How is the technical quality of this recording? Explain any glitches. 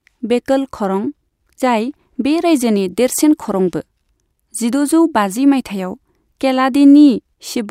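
Nothing stood out on listening to this speech recording, so there are no glitches to explain.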